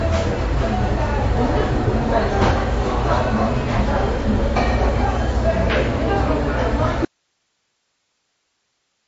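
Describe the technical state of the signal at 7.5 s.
At 7.5 s the signal is in an audio dropout to a faint residue, which begins abruptly at 7.05 s and runs to the end of the clip. The wanted sound is gone and only hiss remains, roughly 50 dB below the earlier level. The likely cause is a source that stopped delivering while the downstream path stayed live. The hard switch to a steady hiss floor sets it apart from a fade or a natural pause, either of which would taper or fall to true quiet.

The whole clip also carries MP3 compression. It is plainly audible in the material before the gap, and the encoder's artefacts are still part of the signal at this point. Nothing is present above 7.6 kHz, and the damage sounds watery and swirly, with smeared attacks, which fits a low bitrate around 48 kbps. The likely mechanism is an encoder short of bits, cutting the treble and dropping weak frequency lines frame by frame. 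That flickering, metallic texture distinguishes it from a simple low-pass filter, which would dull the top end without the swirl.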